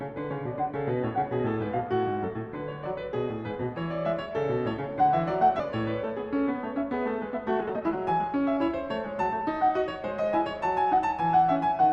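A skip ahead at 5.59 to 5.61 s cuts roughly a second out of this music clip. The receiver discarded that stretch, either lost in transit or dropped when an overfull jitter buffer let go of it. Playback then jumps straight to audio that was already queued. Nothing fills the gap, so the material on either side is butted almost directly together, and the passage lurches forward with its continuity broken.

Jitter buffer speed-up follows twice, first from 7.19 to 8.58 s at about 127% speed, then from 9.14 to 9.78 s at about 108%. The buffer held more audio than its target. To shrink that backlog the receiver repeatedly cut out short pitch-period-sized pieces, about 0.4 s in total in the first stretch and a few tens of milliseconds in the second. The pitch stays the same, but the music rushes, most obviously in the first stretch, and loses its steady tempo.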